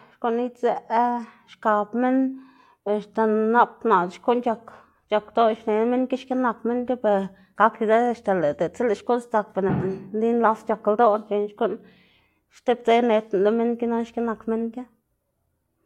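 Speech recording, no technical faults found.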